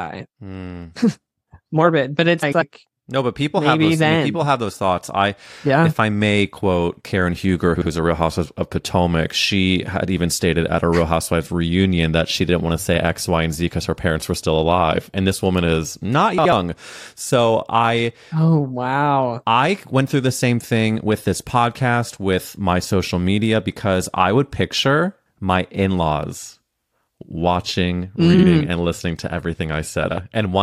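At 2.42 s, just after "but it's", the speech briefly garbles before "no but people", then again at 7.76 s, 16.38 s after "this woman is not", 28.33 s before "mm and listening to", and 30.04 s. Each is frames out of order: two adjacent blocks, about 46 to 93 ms each, swap places. The result is a fluttery scramble. Unlike a dropout or stutter, nothing is missing or repeated and the timing stays intact.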